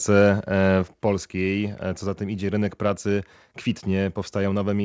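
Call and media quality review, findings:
Microphone volume stepped down at 1.02 s: speech and background drop together by about 5 dB in one step. Likely automatic gain control cutting device input level after loud or clipping input. Audio passes through G.722 call path; nothing above 8 kHz.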